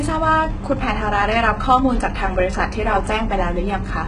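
Throughout, the s sounds and upper treble come across gritty, metallic and lispy, with heavy damage and nothing above 11 kHz. This is likely HE-AAC compression at a very low bitrate, around 12 kbps. The treble is rebuilt by copying lower bands upward, so its harmonics fail to line up.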